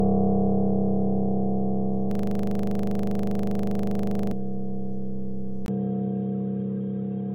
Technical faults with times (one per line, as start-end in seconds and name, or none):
2.11-4.32 system hang loop
5.66-7.35 input switched to a poorer device